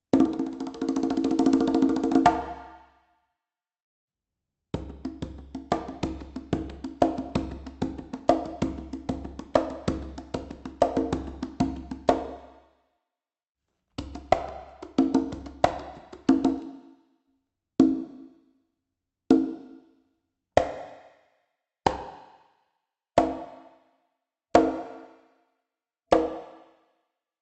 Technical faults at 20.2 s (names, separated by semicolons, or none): none